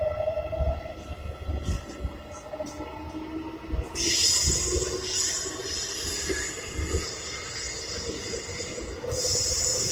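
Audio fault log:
Throughout, Opus compression: the sound comes across grainy and rough, with tonal parts smeared into a noisy, hissy texture and plainly audible damage, yet without the swirling holes of MP3, and content still reaches up to about 20.4 kHz. This is likely a low-rate Opus encode in its music mode, which preserves each band's energy but refills starved bands with folded or noise-like material; the coarseness points to roughly 16 kbps.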